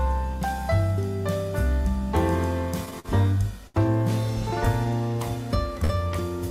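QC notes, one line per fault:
2.85 to 3.09 s, repeated stalls (stutter): across this quarter-second the playback stops and restarts four times, and about 81 ms of it is filler, roughly a third of the span. The longest single wait is 47 ms. Packets were reaching the receiver late, so its jitter buffer kept running dry, and each time it carried the last sound on until fresh audio arrived. Nothing is dropped, but the sound drags and catches.
3.67 to 3.76 s, short stall from a late packet: a sound is held for about 70 ms too long before the audio resumes where it left off. One packet missed its playout time, the buffer emptied, and the receiver stretched what it already had while waiting. No audio is lost, only delayed, so the effect is a brief smear with a faint buzzy or dipped quality.
5.84 to 5.92 s, short stall from a late packet: the same effect, shorter, with about 51 ms of held sound before playback continues from the same point.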